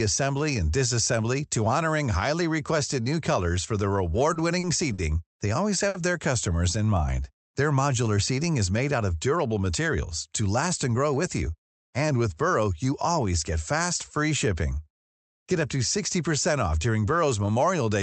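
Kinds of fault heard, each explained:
Short stall from a late packet: at 4.33, 4.59, 4.93 and 5.88 s the jitter buffer ran empty while a delayed packet was awaited. The speech holds its last sound for 20, 40, 50 and 60 ms, the final stall falling just before "their customers in", then resumes with nothing lost.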